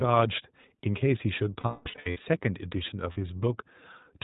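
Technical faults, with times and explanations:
Throughout, iLBC codec: the whole speech clip has gone through narrowband iLBC, likely around 15.2 kbps in 20 ms frames, so nothing above 4 kHz survives and the voice comes out clear but plainly rough and a bit synthetic, each frame's excitation coded on its own.
1.60 to 2.22 s, lost iLBC frames: a burst of losses totalling about 460 ms scattered over roughly 600 ms, the longest run near a fifth of a second. The decoder keeps repeating the last pitch cycle with added noise, so it sounds like a held, buzzy, fading vowel.
3.12 s, lost iLBC frames: a short 40 ms loss, two frames' worth, filled in with the same repeated pitch cycle. It's a brief buzzy smear, and because iLBC frames stand alone the sound snaps back straight afterwards.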